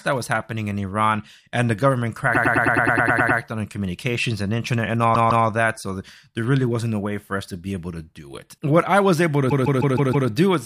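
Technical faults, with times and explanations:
2.34–3.38 s, 5.14–5.45 s and 9.50–10.28 s, repeated frames: a stuttering loop, first after "and the government", then after "communications and internet and", and again near the end. The same compressed frames were decoded again. A 104.5 ms block plays 10 extra times, then 156.7 ms blocks play 2 and 5 extra times, adding about 2.1 s in total.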